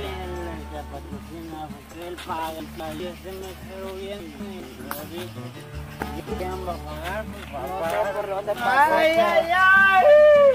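Three brief jumbled stumbles at 2.6–3.0, 4.2–4.6 and 6.0–6.4 s are chunks out of order: a 200 ms chunk plays one slot late, swapping with its neighbour.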